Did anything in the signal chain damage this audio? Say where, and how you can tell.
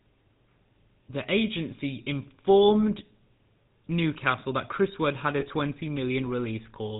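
Yes. The GSM full-rate codec stage shapes the entire clip. The speech has a buzzy, gravelly roughness and nothing above 4 kHz, which fits the 13 kbps full-rate coder: a vocal-tract filter driven by sparse, regularly spaced pulses that keep only every third excitation sample.

Lost GSM frames, a network-stage fault, appear from 5.4 to 5.45 s. The sound briefly freezes into a rough, metallic ring, consistent with about one 20 ms frame lost. The decoder concealed it by repeating the last good frame's parameters.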